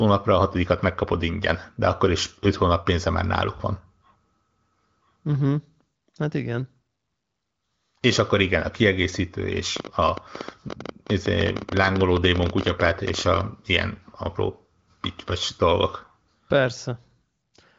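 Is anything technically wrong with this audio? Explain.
Yes, there is a train of clicks from 9.77 to 13.42 s, just after "akkor igen a kiegészítő". Likely interference or a faulty connection injects repeated pulses, about 14.6 per second at uneven spacing, some fifty in all. They are heard as sharp ticking and popping, peaking about 15 dB above the speech.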